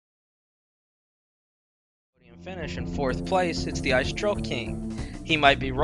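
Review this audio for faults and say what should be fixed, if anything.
Nothing here needs to be fixed, as the audio has no faults.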